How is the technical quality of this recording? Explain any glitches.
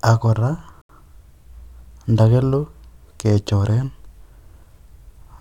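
The speech has one audible glitch. From 0.82 to 0.89 s it drops to silence for about 78 ms, then resumes. This is likely a Bluetooth stall: interference delayed wireless packets, the headphones' buffer emptied, and playback paused until the retransmitted audio arrived.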